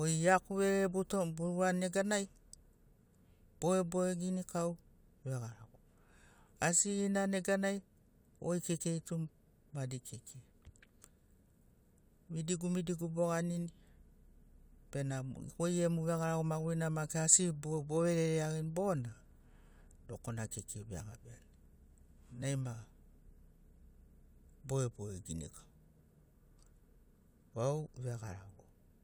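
Nothing in the recording stood out as a fault on listening.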